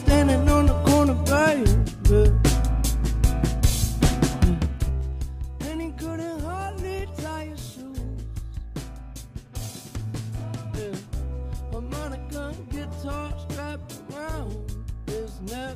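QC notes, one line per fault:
4.48 to 5.3 s, zipper noise: the level drops by roughly 15 dB in unsmoothed 2 dB steps, about ten a second, so each abrupt jump leaves a small click in the waveform, and together they form a ticking zip over the fade.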